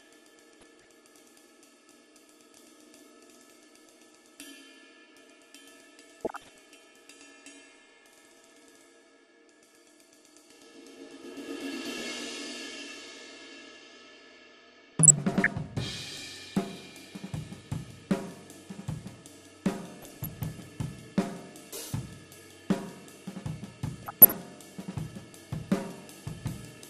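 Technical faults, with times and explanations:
Throughout, MP2 compression: the whole clip is dull and carries a gurgling, granular texture, likely from MPEG Layer II coding at around 80 kbps. At that rate the encoder cannot give enough bits to all 32 sub-bands, so upper bands drop out or flicker in and out, and the bands that survive are coarsely quantised. The result is the muffled, grainy sound of low-rate digital radio.
0.59–0.92 s, 6.20–6.75 s, 14.68–15.47 s, 20.02–20.45 s and 24.02–24.34 s, DAB burbling: five short bursts of burbling sit on top of the programme. Bit errors at a fraction of a percent have slipped past error correction into the MP2 data, corrupting samples so that single sub-bands carry short blips of noise. The burst near 24.0 s is the most heavily corrupted, with an error rate of roughly 0.7 percent.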